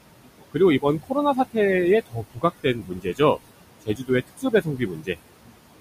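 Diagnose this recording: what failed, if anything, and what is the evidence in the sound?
The failure is in call processing, specifically the noise suppressor. The room noise sits about 13 dB under the speech, and the suppressor pulls it down by about 21 dB in the gaps, then lets it back up under the talking. That pumping is audible across the whole clip, because the gain is being set band by band on each frame.

There is also speech cut by the noise suppressor, where it misreads quiet parts of the speech as noise and turns them down along with the background. This happens at 0.02–0.6, 1.03–1.16, 2.06–2.44, 2.63–3.2, 3.36–3.53, 3.82–4.1, 4.27–5.17 and 5.43–5.58 s. The drops run from about 17 to 22 dB, so soft consonants and word tails sound swallowed. The longest stretch, at 4.27 s, loses about half a second in total.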